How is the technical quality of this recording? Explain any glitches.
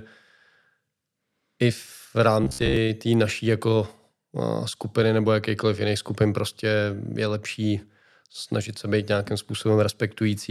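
One glitch affects this speech recording. From 2.44 to 2.77 s, just before "té naší jako", there is robotic sound from repeated short buffers: a fixed metallic buzz at 67 Hz, likely from roughly 15 ms chunks looping while about half the audio is skipped. Unlike a simple pitch shift, the buzz stays rigid instead of following the intonation.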